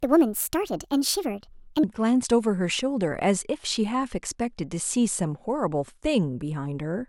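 A section at the wrong speed runs from the start of the speech to 1.83 s. That opening stretch plays back at 1.43 times its recorded rate, so speed and pitch rise together and the voice sounds hurried and raised by roughly seven semitones, close to a musical fifth. At 1.83 s the playback snaps back to natural pace and pitch. The likely cause is that this segment was fitted to the wrong clock during editing or playback.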